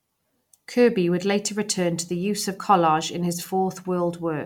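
Listening to this speech recording, nothing stands out as a technical problem at any point.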